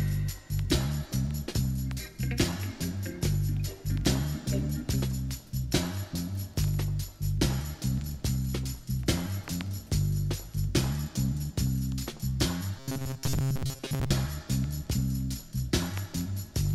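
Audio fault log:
12.78–14.11 s, robotic sound from repeated short buffers: the sound becomes a rigid, metallic buzz locked at 134 Hz that only loosely follows the original. Likely, new audio arrived too seldom, so fragments of about 7.5 ms were looped in place of most of the real signal.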